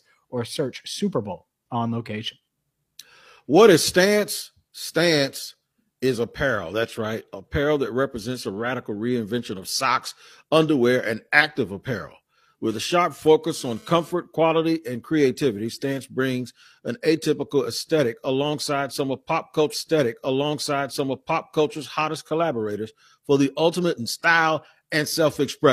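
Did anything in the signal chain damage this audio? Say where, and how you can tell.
Yes. From 12.70 to 14.12 s, just after "underwear and active apparel" and ending before "quality and creativity", a hard, raspy buzz sits under the speech, about 28 dB below it, with a 217 Hz fundamental and a dense stack of harmonics. This is GSM phone buzz, picked up in the analogue wiring. A nearby 2G handset transmitting in data bursts makes the input circuitry rectify its radio pulses, so the buzz arrives in a short spell rather than holding steady.

A second fault sits in the network or playback stage. At 19.69 s, after "alongside some of pop", a small blip marks a jump back, and about 2.0 s of the programme plays again, running to 21.69 s before "hottest collaborators for the" carries on. This is a stream segment repeated: the player fetched or queued the same chunk twice, so the audio rewinds to its start and the listener hears that stretch a second time.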